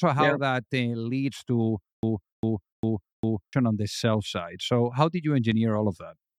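A stutter with silent gaps runs from 1.93 to 3.53 s, just before "on the sell side". A 296 ms fragment repeats four times, each followed by 105 ms of silence on a 401 ms cycle, likely a stalled stream replaying its last chunk while the audio between is lost.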